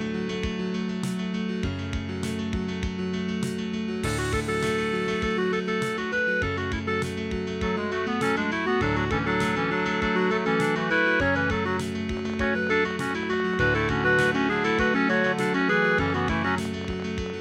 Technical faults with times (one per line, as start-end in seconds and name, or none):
12.17-17.31 train of clicks